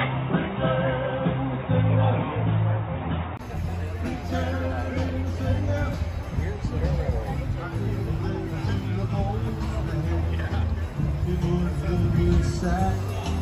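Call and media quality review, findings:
Input switched to a poorer device, likely: 0.00–3.39 s band-limited, nothing above 3.8 kHz, boxy, own noise floor about 35 dB down; 20 ms gap at 3.39 s, then full band. Noise and tone change together at one switch with level unchanged, unlike a codec bandwidth step.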